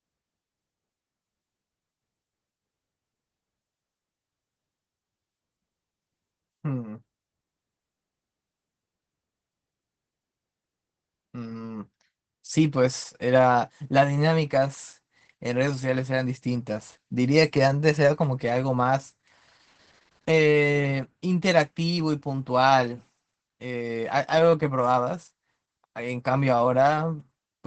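It's a speech recording, and the whole thing has been through Opus voice compression, with damage you can plainly hear from start to finish. The top of the band stops around 8 kHz, and the coarse excitation coding leaves the voice muffled, a bit hoarse and faintly robotic. That points to the SILK coder running at a low rate, something like 12 kbps in wideband mode.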